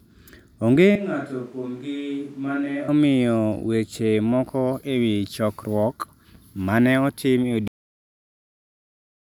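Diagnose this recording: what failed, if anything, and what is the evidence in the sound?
From 0.96 to 2.88 s the speech turns roomy and hollow, loses bass, drops by about 10 dB, and a room noise floor appears around 30 dB below it, ending just before "omiyo weche moko e". This is a switch to a distant microphone at the capture stage, likely a failed close microphone. A simple gain drop would not add reverberance or noise.

A cut-off end occurs at 7.68 s, right after "ma ne otim e". The speech stops mid-sound and falls straight to digital silence, with no decay, until the end. At the buffer or storage stage, the final buffers were never written. A fade-out or mid-file dropout would taper off or resume.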